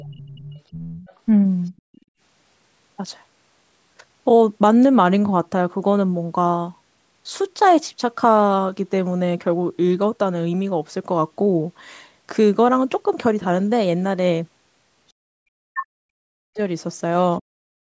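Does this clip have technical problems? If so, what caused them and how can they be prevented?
Yes. From 0.0 to 1.14 s and again from 1.77 to 2.01 s a second voice sits under the talker, the other side's voice leaking through, about 20 dB down at first and about 35 dB down later. The likely cause is loudspeaker playback the echo canceller didn't fully strip. A better-tuned canceller or a headset would prevent it.

The background gated by the echo canceller drops out from 1.81 to 2.18 s, by about 33 dB, and again from 17.72 to 17.87 s, by about 36 dB. The canceller clamps the mic while the far end plays. Gentler suppression with comfort noise would smooth this over.

From 15.48 to 16.6 s the talker's speech is pushed down hard, around 40 dB at worst, for roughly a second. That's speech suppressed in double talk, likely from both sides talking at once. Better double-talk detection or a headset would keep the talker intact.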